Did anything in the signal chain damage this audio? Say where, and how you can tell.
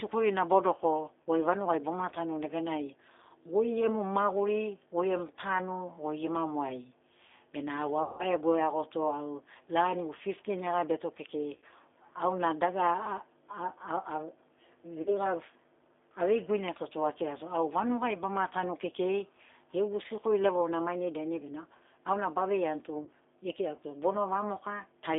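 Yes. The codec stage left damage throughout. The speech is confined to about 300 Hz to 3.6 kHz and sounds rough and slightly synthetic. That fits the G.729 codec at 8 kbit/s, which rebuilds each 10 ms frame from a filter, pitch and a few pulses.

Network packet loss, concealed by the speech codec, occurs at 1.22 to 1.27 s, 8.03 to 8.25 s, 11.56 to 11.64 s, 15.02 to 15.11 s and 23.03 to 23.10 s. Gaps run 40 to 160 ms. The decoder stretches the last pitch and filter into a fading buzzy tone or coloured noise, and weak, distorted audio lingers after each gap.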